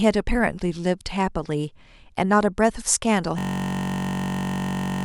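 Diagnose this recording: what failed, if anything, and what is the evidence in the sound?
At 3.39 s the speech abruptly stops and becomes a steady, rough buzz pitched at about 46.9 Hz that continues to the end of the recording. This is a system hang loop at the driver or buffer stage. The host or driver froze, but the audio hardware kept replaying the same 21.33 ms segment of its ring buffer dozens of times. That loop length fits a 1024-sample buffer, and a segment that short fuses into a tone instead of a stutter.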